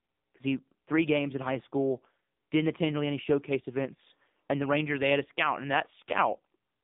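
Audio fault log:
Throughout, AMR narrowband mobile codec: the speech is confined to a line band of about 200 Hz to 3.7 kHz, with nothing above 3.7 kHz. The codec damage is plainly audible as a buzzy, synthetic edge, which fits one of the lower AMR-NB modes, around 7.4 kbps. The codec rebuilds the voice from a vocal-tract model driven by a few pulses per short subframe. A plain telephone-band filter would dull the sound but leave it natural, without this buzz.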